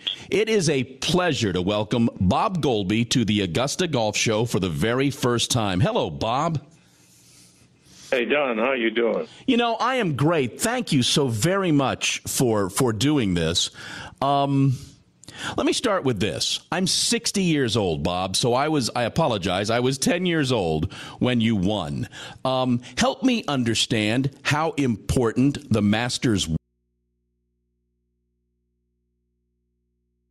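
Gain pumping runs through the whole clip, swinging around 15 dB, likely from excessive gain feeding a fast limiter.

At 26.57 s an audio dropout to a faint residue cuts the signal abruptly. Only mains hum remains, roughly 50 dB down, likely from an open input, until the end.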